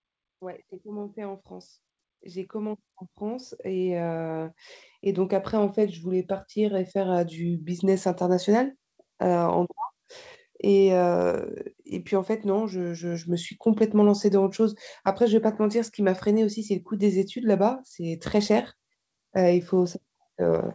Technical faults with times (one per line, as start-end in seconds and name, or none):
0.39-8.04 automatic gain rising